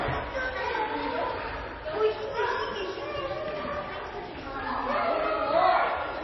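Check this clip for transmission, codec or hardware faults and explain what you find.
One fault is present throughout: likely MP3 compression, with treble missing above 5.8 kHz and watery, swirling artefacts, which fits a starved bitrate near 24 kbps. A spectrogram would show a flat ceiling at 5.8 kHz and flickering gaps below.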